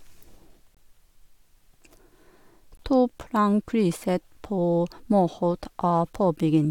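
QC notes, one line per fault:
0.75–0.77 s and 2.77–2.79 s, gap between stream segments: two short, hard-edged dropouts to dead silence, about 22.5 ms and 18.8 ms long, landing almost exactly 2 s apart in the speech. That spacing matches 2-second segment boundaries. The timestamps on neighbouring segments don't quite meet, so the player pads the hole with silence. Nothing gets cut out; the audio just gets pushed later, which is why it sounds like a tiny stutter rather than a skip.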